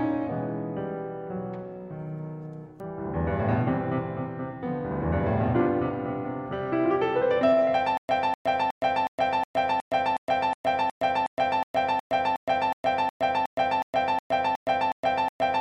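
Stutter with silent gaps runs from 7.97 s to the end of this music clip: a 249 ms burst of the music repeats 21 times, each followed by about 117 ms of digital silence, giving an even cycle of roughly 366 ms. This is likely a stalled player or stream that, on each retry, replays the last fragment it holds and then runs dry, so the music that should follow 7.97 s never arrives.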